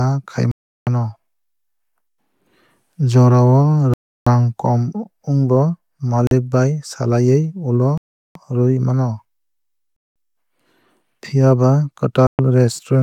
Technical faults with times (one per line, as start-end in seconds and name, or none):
0.51-0.87 Bluetooth stall
3.94-4.27 Bluetooth stall
6.27-6.31 Bluetooth stall
7.98-8.35 Bluetooth stall
9.96-10.16 Bluetooth stall
12.27-12.39 Bluetooth stall